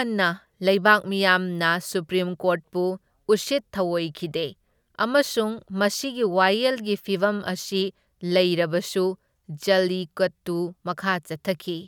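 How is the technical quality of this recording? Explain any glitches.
No technical faults are audible.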